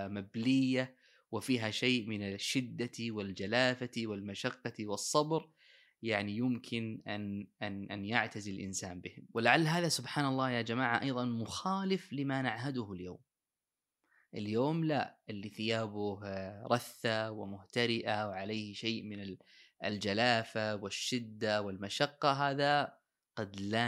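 Speech recording with no audible technical faults: no dropouts, clipping, glitches or distortion to report.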